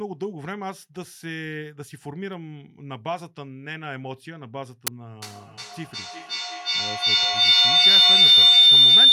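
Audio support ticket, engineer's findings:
Feedback howl from 5.22 s through the end. Builds rather than decays, narrows to a shrill tone around 4 kHz, pulsing about every 0.4 s, peaking about 19 dB over the speech. Probably two devices in one room on the same call, mic-to-speaker loop gaining each pass. Muting one breaks it.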